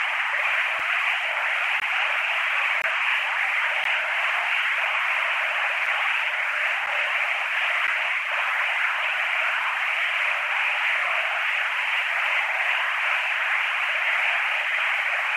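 At 0.79 s, 1.80 s, 2.82 to 2.84 s, 3.84 s, 5.86 s, 6.86 s and 7.87 s the sounds are broken by short hard-edged dropouts, a gap between stream segments. The timing of adjacent 1.0 s segments leaves a hole that playback pads with silence, from about 5 ms up to 21.7 ms long. Each lands near a segment boundary, so the dropouts fall roughly once per second. No material goes missing, but the added silence nudges later sound slightly late.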